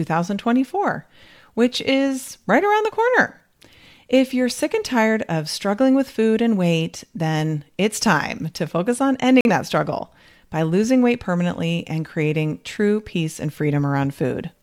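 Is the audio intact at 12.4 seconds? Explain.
Yes, the audio is intact at 12.4 seconds, with no fault audible at that moment.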